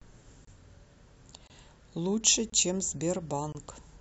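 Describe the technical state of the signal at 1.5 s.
A gap between chunks sits at 1.47–1.50 s: the speech arrives in one-second chunks and one join leaves about 25 ms of inserted silence, heard as a short hole.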